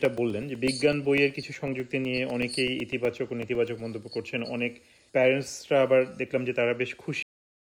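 From 0.05 s to about 3.93 s, the audio carries periodic USB or driver dropouts. Every 0.125 s, something on the system blocks the USB bus or the audio driver. A tiny slice of audio, around 2 ms, never arrives and is filled with silence. That makes roughly thirty gaps, eight per second. Each one is heard as a small, evenly spaced tick. The ticks follow the signal and vanish where it is quiet.

At 7.23 s the audio hits a cut-off end. The final buffers were never written or played out. So the sound stops in the middle, with no natural decay. It falls straight to digital silence, which holds until the file ends. The abrupt edge can leave a click at the cut.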